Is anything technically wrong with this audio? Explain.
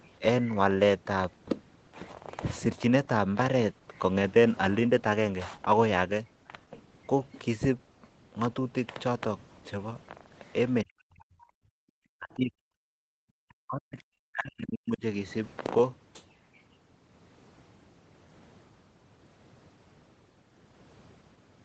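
Yes, speech suppressed in double talk and the other side's voice leaking through.

Between 10.84 and 15.03 s (10.84–11.75, 12.17–12.69, 12.86–12.91, 13.25–13.98, 14.30–15.03 s) the speech dips by as much as roughly 40 dB. An echo canceller likely muted the talker during overlap.

At 10.45–10.53, 10.79–10.93 and 13.98–14.03 s, faint scraps of a second voice, roughly 30 to 35 dB down, are likely residual loudspeaker echo. They cluster around those dips, unlike steady room crosstalk.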